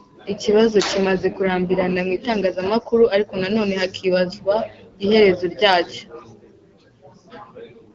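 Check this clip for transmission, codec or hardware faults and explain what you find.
Two AMR rate drops, at 0.35 to 2.22 s and 7.62 to 7.92 s. The codec is switched down, consistent with 12.65 to 8.85 kbit/s, so speech turns rougher and more synthetic. The spectrogram keeps full bandwidth with no gaps, just smeared, grainier harmonics.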